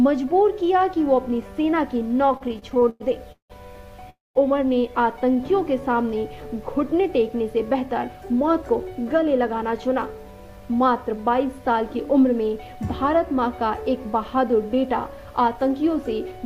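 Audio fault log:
2.27–3.53 s, repeated stalls (stutter): packets kept arriving late, so the sound hangs eleven times, 421 ms filled in total, longest 175 ms, nothing lost.
4.10–4.38 s, call audio freeze: the sound holds, then drops to silence for about 190 ms before resuming intact, likely from packets held up for 256 ms.
5.14–5.82 s, jitter buffer slow-down: the receiver repeated pitch periods to rebuild its reserve, adding 52 ms, so the sound drags at 93% speed, same pitch.
7.74–9.06 s and 15.28–16.40 s, jitter buffer speed-up: too much audio was queued, so short pitch-period pieces were cut, roughly 150 ms then 100 ms, giving a hurried feel at 110% and 108%.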